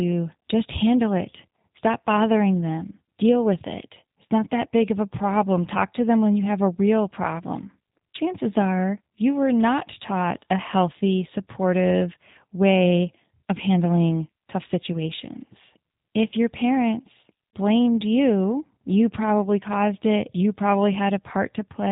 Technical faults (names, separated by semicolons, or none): G.729 codec